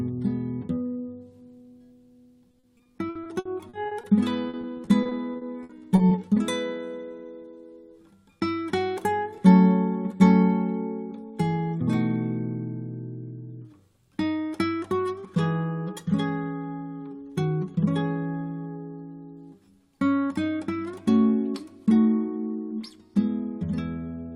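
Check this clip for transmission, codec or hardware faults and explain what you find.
Repeated packet loss (robotic sound) occurs from 2.51 to 4.05 s and again from 4.49 to 6.13 s. Short gaps, up to 60 ms, get filled by extending earlier sound. That covers 23% and 18% of each stretch, making it choppy and robotic.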